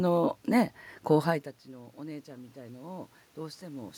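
Short speech recording, and from 1.24 s to 3.95 s there's automatic gain rising: the talker drops off the mic around 1.5 s, the input falls about 19 dB, and the AGC gradually adds about 5 dB, swelling voice and room noise together.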